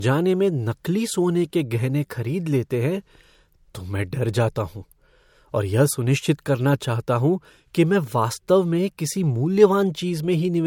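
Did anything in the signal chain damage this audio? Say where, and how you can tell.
Yes, at the codec stage, and it persists through the whole speech clip. The spectrum stops dead at about 18.8 kHz, and the swirly, smeared texture of heavy MP3 coding remains despite a file size that suggests generous bitrate. That points to low-bitrate audio saved at a high bitrate, likely a roughly 64 kbit/s MP3 re-encoded at 320 kbit/s. The second pass preserved the first encoder's losses but could not restore them.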